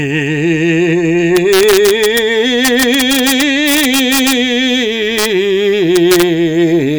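Integer overflow breaks into the music from 1.37 to 2.19 s, 2.65 to 4.32 s, 5.19 to 5.26 s and 5.96 to 6.23 s. Loud peaks pushed about 1 to 2 dB past the integer ceiling, and instead of being held at the limit they wrap around to the opposite extreme. Each overshoot becomes a violent, snapping crack. Clipping would flatten those peaks into a duller buzz, which is how to tell the two apart.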